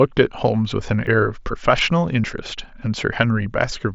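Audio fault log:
1.07 s and 2.24 s: dropped buffer (overrun). Each is the speech jumping forward with no silent gap. About 20 ms is lost first, about 30 ms second. Likely, the buffer was read too late and overwritten, splicing the two sides together.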